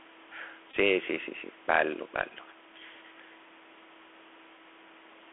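Speech carried over a Bluetooth CVSD headset codec: nothing passes above about 3.4 kHz, s sounds turn scratchy, and granular hiss sits underneath, unlike smoother wideband codecs. Between 0.71 and 0.77 s, repeated Bluetooth headset packets cause brief buzzing; the longest run lasts about 20 ms, and the 267 Hz buzz tells it apart from a plain dropout's silence.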